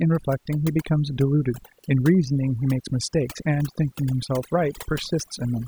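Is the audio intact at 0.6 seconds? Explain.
No. Overdone noise removal runs through the whole clip, gating quiet spectral bands near the noise floor, leaving twinkling specks in the background, unlike steady muffling from low-pass filtering.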